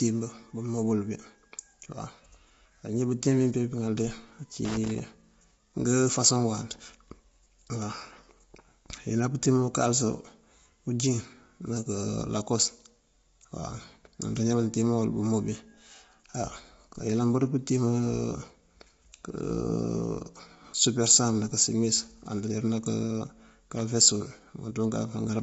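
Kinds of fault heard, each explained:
Low-delay AAC compression: The speech sounds rough and grainy all the way through, with a hiss sitting between the harmonics and nothing above about 7.7 kHz. That's likely a low-delay codec like AAC-ELD. Its short frames blur pitch detail, and the damage level fits roughly 24 kbps.
Loose connector crackle: A worn or dirty contact keeps making and breaking, chopping the signal into a scratchy burst. Here it's a ragged crackle from 4.65 to 4.99 s, then a brief second one at about 23.77 to 23.81 s.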